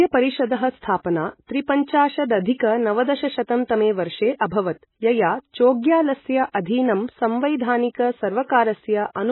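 Watery, swirling speech with no content above 4 kHz runs through the whole clip, sibilants turning metallic and consonant attacks smeared. The likely cause is heavy MP3 compression, whose fixed treble cut and flickering frequency lines fit a bitrate near 16 kbps.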